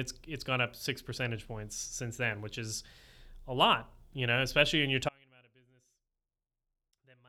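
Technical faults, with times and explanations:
5.09 s to the end, audio dropout to a faint residue: the speech cuts off abruptly, with no fade or natural pause, and for the remaining two seconds or so only a faint sound remains, roughly 35 dB below the signal's normal level. This likely comes from the wanted signal being lost somewhere upstream while the path after the break stayed live, so a faint residue remains instead of true silence.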